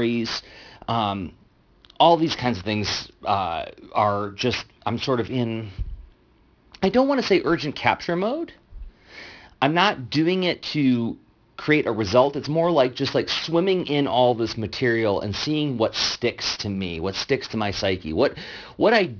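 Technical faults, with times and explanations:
Throughout, aliasing: the speech sounds as though it was brought down to a rate of around 11 kHz with no anti-aliasing filter, so everything above the 5.5 kHz fold point is mirrored back into the band as unrelated, wrong frequencies. These images sit roughly 15 dB under the speech, loud enough to give sibilants a gritty, metallic edge, and the spectrum runs hard up to 5.5 kHz instead of rolling off.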